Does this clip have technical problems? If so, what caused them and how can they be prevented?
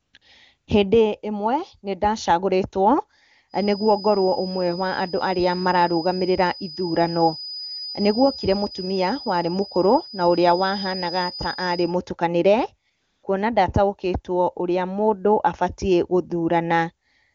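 Yes. The phone's voice activity detection judged the talker silent and stopped sending speech frames, so the receiver filled the gaps with AMR comfort noise built from a rough estimate of background level and spectrum. This happens at 0.01–0.13 s, 0.17–0.21 s, 0.57–0.67 s and 12.89–13.23 s, the longest gap being 340 ms. In each gap the real background gives way to a smooth, steady hiss that switches in and out. Raising the detector's sensitivity to quiet speech, or disabling discontinuous transmission where bandwidth allows, would prevent this.

From 3.47 s to 11.98 s a thin, steady feedback whistle at 5 kHz sits well below the speech, swelling and fading slowly in level. The likely cause is a loudspeaker-to-microphone loop held just at the edge of feedback, where one high frequency keeps ringing without building into a howl. Reducing playback gain, separating speaker and microphone, or using stronger echo and feedback suppression would prevent it.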